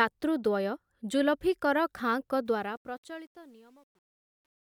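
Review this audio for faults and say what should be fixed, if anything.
From 2.46 s to 4.71 s, the fade-out grows gritty, worst from 3.15 s to 4.72 s. This is truncation distortion on a fade: the gain stage quantises without dither, which fits a 10-bit path. Render fades at full word length and apply dither whenever reducing bit depth.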